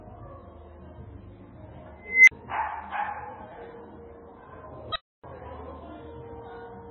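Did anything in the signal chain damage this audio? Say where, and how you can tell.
Yes. The codec stage damaged the whole clip. Nothing remains above 7.4 kHz, and the sound is watery and swirly, with smeared attacks. That likely comes from heavy MP3 compression at a very low bitrate, perhaps around 16 kbps. Weak frequency lines flicker between frames.

An unstable filter in the processing stage fails from 2.01 to 2.31 s. A tone around 2 kHz swells over about 270 ms until it clips. The filter's output then overflows and drops to silence for 40 ms while the filter resets.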